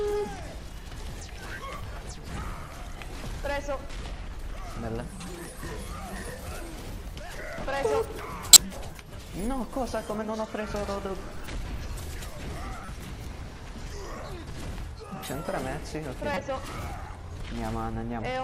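At 8.53 to 8.57 s there's a corrupt frame decoded: a short, loud chirp of misplaced energy spanning a few damaged frames. Another, much fainter blip sits at 12.85 to 12.88 s, likely a single frame. A third, moderately loud, lands at 16.34 to 16.37 s, about two frames. Each time, flipped bits in the compressed frame sent the decoder the wrong gains or codes, and it played them anyway.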